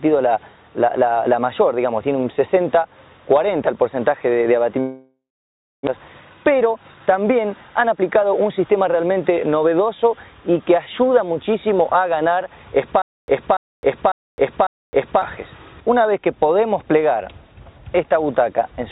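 From 4.8 to 5.89 s a long network dropout, likely lost packets, leaves a fading buzz, then about 0.62 s of near silence. Unlike a stutter, nothing repeats, and roughly 0.6 s of audio never returns. A jitter buffer speed-up follows from 5.97 to 9.81 s, running 11% fast at unchanged pitch to trim about 0.4 s of built-up delay. It sounds hurried but is not raised in pitch the way a sped-up recording would be. From 13.02 to 15.22 s comes a stutter with silent gaps, likely a stalling stream. The same 287 ms fragment plays four times, each followed by 263 ms of digital silence, repeating every 550 ms. This steady, identical repetition sets it apart from the dropout's single fade. Throughout, the call codec removes everything above 4 kHz.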